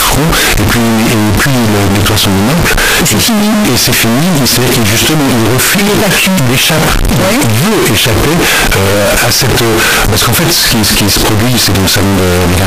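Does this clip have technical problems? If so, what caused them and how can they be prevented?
Yes. A float read as integer fault runs throughout the clip: the speech is extremely loud and harsh, the waveform flattened into a near-square shape at an almost fixed, high level, with background noise as loud as the speech, though the pitch can still be followed. The likely cause is 32-bit floating-point samples decoded as 32-bit integers, so each sample's sign and exponent bits set its level. Prevention: declare the sample format correctly in the file header and check it on import.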